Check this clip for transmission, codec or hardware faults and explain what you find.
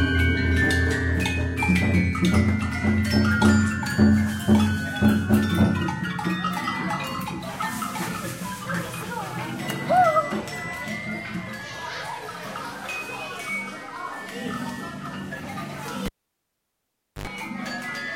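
One hardware fault: a cable pulled and plugged in, from 16.06 to 17.27 s. A live connection is broken and remade. The signal path opens and closes with a pop, leaving near silence for about 1.17 s. As the plug goes back in, the tip makes contact before the shield is grounded, so about 85 ms of 50 Hz mains buzz leaks through. A second pop marks the moment the sound returns.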